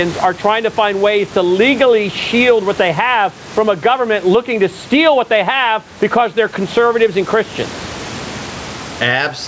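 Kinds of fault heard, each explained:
Gain pumping: Throughout the speech, the level breathes, with a gain swing of roughly 15 dB. Loud and quiet syllables sit unnaturally close in level, giving a squashed, pressed quality. This likely comes from input gain set far too high for the microphone, with a fast compressor or limiter clamping down on every loud peak and releasing in the gaps.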